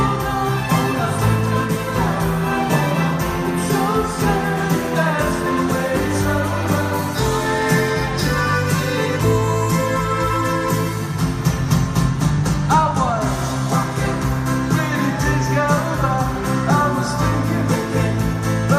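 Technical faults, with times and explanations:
No technical faults can be heard anywhere in this audio. Nothing in the signal calls for a time or an explanation.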